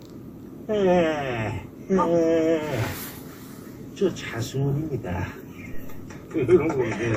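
From start to finish the audio carries the smeared, swirly artefacts of two different encoders layered together, likely from transcoding between lossy codecs, which fits a WMA encode near 96 kbit/s re-encoded to AAC-LC near 64 kbit/s. A spectrogram shows a hard ceiling at 15.2 kHz with patchy, flickering high bands.

At 5.74 s a phantom power thump hits: a supply switching on or off on a live input sends a voltage step through the coupling capacitors. It sounds like a deep thud lasting until 6.16 s. The waveform shows a large low-frequency excursion that decays over about 95 ms.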